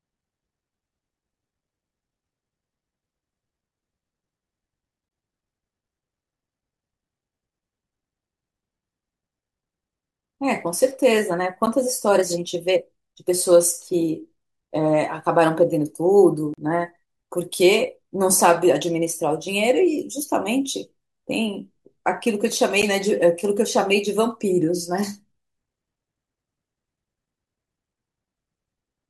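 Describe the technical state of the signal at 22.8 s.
At 22.82 s the speech drops out in a block of digital silence lasting about 10.7 ms, which fits a 512-sample buffer that was left unfilled and written out as zeros. Because the signal cuts out and back with no fade, the short gap is heard as a brief tick or dip. On the waveform it appears as a short flat, silent stretch. A spectrogram shows a thin blank column.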